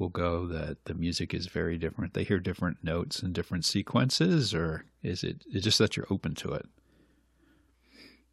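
From 0.11 s to the end of the clip, clock slip clicks run under the speech as a soft, even rattle, with roughly 25 ticks a second and about two hundred in all. The likely cause is two unsynchronised clocks differing by around 500 ppm, each tick fitting a single dropped or repeated sample. The rigid spacing, and the fact that it follows the level of the signal and vanishes in silences, set it apart from random crackle or dropouts.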